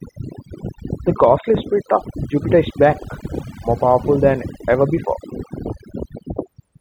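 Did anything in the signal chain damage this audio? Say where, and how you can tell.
Yes. Throughout the speech, the background drops to near silence between phrases, speckled with twinkling artefacts, and the voice loses its softer consonants and breathy tails. That is overdone noise removal at the processing stage: a suppressor driven too hard pushes any frequency band near its noise estimate far down or off, so isolated surviving bands flicker as tonal specks and the quieter voice components are stripped away with the noise.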